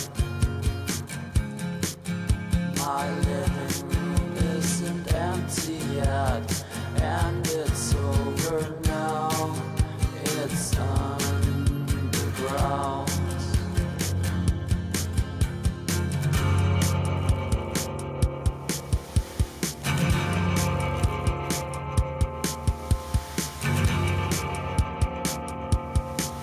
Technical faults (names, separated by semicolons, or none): none